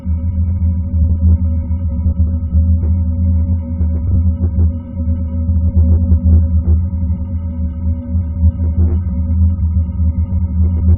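Frames out of order at 1.04–1.17 s and 4.07–4.16 s: adjacent 60 ms blocks, then adjacent 40 ms blocks, play swapped, giving a brief garbled flutter.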